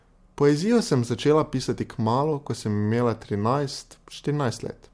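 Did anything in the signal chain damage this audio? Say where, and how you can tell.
No, nothing along the chain seems to have damaged this speech; I can't hear anything that points to a problem at any stage.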